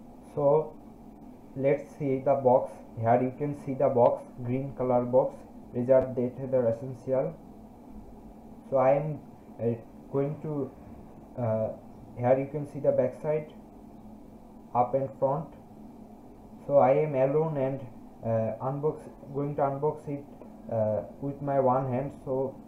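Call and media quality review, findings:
Repeated buffer, 6.02–6.04 s: brief buzzy click where the same tiny slice of sound plays three times in a row, with a hard join at each repeat. Probable component is the playback device or its output buffer. New audio arrived late, so the last block, about 10.67 ms and fitting a 512-sample buffer, was replayed twice more. Essentially no audio was lost.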